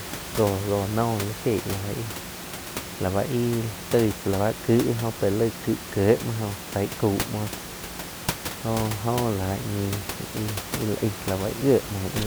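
Nothing stood out on listening to this speech clip; the only background sound is the room's own noise, sitting about 10 dB below the speech.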